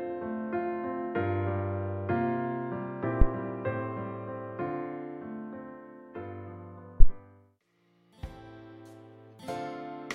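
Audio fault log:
3.22–3.28 s and 7.00–7.13 s: phantom power thump. A supply switching on or off on a live input sends a DC step through the coupling capacitors, giving deep thumps peaking near −8 dBFS that decay within 15 and 28 ms. The waveform shows large one-sided excursions, and the spectrogram shows brief dark low-frequency blotches.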